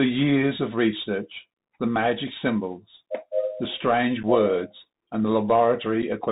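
Throughout, the speech passes through the Bluetooth CVSD headset codec, a one-bit adaptive-step coder that fits a 64 kbps link. It removes everything above 4 kHz, roughens sibilants, and leaves a granular hiss.

At 4.23 s and again at 6.02 s, unconcealed Bluetooth headset packet loss drops about 7.5 ms of audio, likely a single packet each time, leaving an abrupt gap before the speech resumes quieter for a moment.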